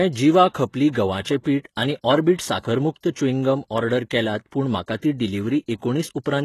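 Speech throughout, with plainly audible HE-AAC compression damage: sibilants sound gritty and metallic, fitting a very low bitrate near 16 kbps. A spectrogram shows nothing above 12.3 kHz, with copied-looking treble bands, likely from spectral band replication.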